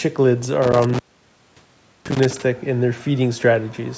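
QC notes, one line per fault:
0.62–2.42 s, intermittent contact: a loose connection opens for about 1.07 s in total, cutting the speech to faint hiss, with crackle wherever contact breaks and remakes.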